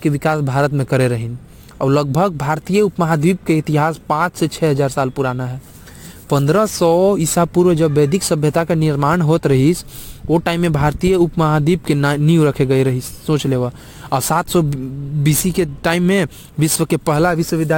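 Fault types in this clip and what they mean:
Crude rate conversion: The speech was resampled by simply dropping samples, which fits a step from 48 kHz down to 44.1 kHz. It leaves a gritty, inharmonic fizz riding on louder and brighter syllables throughout, roughly 25 dB below the speech.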